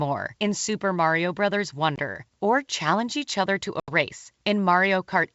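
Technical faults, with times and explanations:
1.96–2.00 s and 3.80–3.90 s, packet loss on an ADPCM call: gaps of 20 ms before "or challenge each other" and 80 ms after "challenge each other to" go abruptly silent. The resumed G.722 wideband sound then returns slightly distorted until the decoder's predictor and step size re-align.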